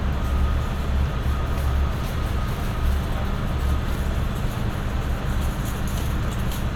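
At about 3.95 s there's a tiny skip where the audio jumps forward, which is an overlap between stream segments. Two segments claimed the same few milliseconds, so the player trimmed that stretch away, fitting 2-second segments, and the waveform jumps across the seam.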